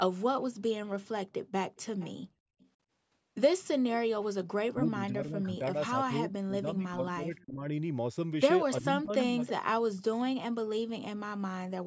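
From 1.76 to 2.12 s and again from 2.59 to 2.69 s, an echo leak occurs, likely because an echo canceller let some loudspeaker pickup through. A faint delayed copy trails the sound by about 356 ms, around 20 dB down and then much fainter. From 4.74 to 7.67 s and from 8.81 to 9.41 s, the echo canceller likely treated both sides talking as echo, and the speech is suppressed in double talk, dipping in patches by up to about 20 dB. From 9.45 to 9.51 s, another short echo leak follows, likely from the same cause, lagging by 324 ms and louder at about 15 dB down.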